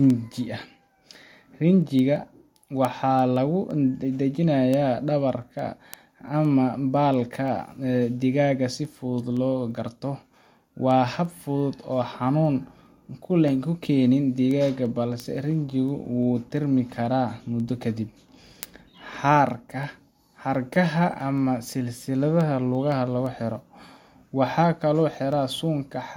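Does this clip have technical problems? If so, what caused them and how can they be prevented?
Yes. Word clock ticks run through the whole speech clip, from 0.10 s to 26.01 s, roughly every 0.15 s. The receiving device isn't locked to the sender's clock, with a drift of around 150 ppm, so each slip drops or repeats a sample. Slave the receiver to the incoming clock.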